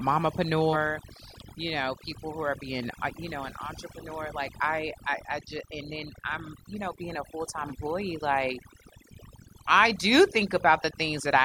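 Throughout the speech the background drops and breaks up into twinkling specks. This is overdone noise removal: the reduction was set so hard that bands near its noise estimate were pushed almost to nothing, taking quieter parts of the voice with them.

At 0.72 to 0.75 s and again at 7.68 to 7.72 s, the sound lurches forward. These are compressed frames skipped. Each jump loses around a tenth of a second, which fits about two missing 42.7 ms frames.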